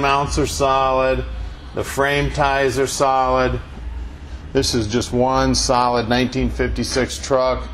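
Nothing in the audio stood out as a technical fault when I listened.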